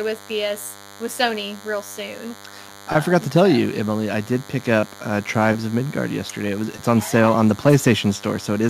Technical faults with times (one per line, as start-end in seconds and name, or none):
0.00-8.70 DECT cordless phone buzz